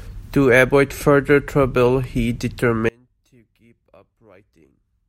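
Speech recording with a fault from 2.89 s to the end: one channel was likely inverted, so the two stereo channels cancel when summed to mono. The centred voice drops by about 32 dB and turns faint.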